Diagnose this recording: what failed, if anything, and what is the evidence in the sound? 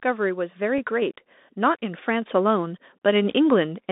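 Bluetooth CVSD headset codec, throughout the speech: the band stops near 200 Hz and 3.7 kHz, which fits a 64 kbps CVSD link. The one-bit, adaptive-step coding is plainly audible as a granular hiss, scratchy s sounds, and slope distortion on loud high content.

Bluetooth headset packet repeated, at 0.78 s: a brief tick, about 3.8 ms long, which points to a single lost headset packet. The chip decoded the previous packet's bits a second time, and the repeated slice does not join smoothly to its neighbours.

Microphone volume stepped up, at 1.02 s: speech and background rise together by about 4 dB in a single step. The call-processing stage judged the input too quiet and raised the device's capture gain at once instead of ramping it.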